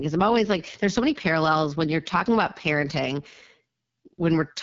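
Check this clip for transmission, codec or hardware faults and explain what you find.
There's one codec fault here, running through the whole recording: AMR wideband (HD Voice) coding at a very low rate. The voice comes out rough and raspy, with a buzzy, grainy edge. Nothing survives above about 7.5 kHz. AMR-WB rebuilds speech from a pulse-excited vocal tract model up to 6.4 kHz and pads the band just above with shaped noise. At this level of damage the model is starved of bits, which fits the lowest 6.6 kbit/s mode.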